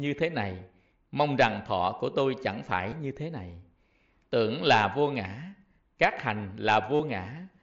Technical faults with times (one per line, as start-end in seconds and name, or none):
2.91 concealed Bluetooth headset packet loss
6.95-7.00 concealed Bluetooth headset packet loss